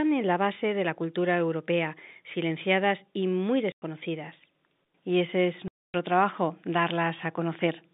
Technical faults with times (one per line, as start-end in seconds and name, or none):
3.72-3.82 packet loss filled with silence
5.68-5.94 packet loss filled with silence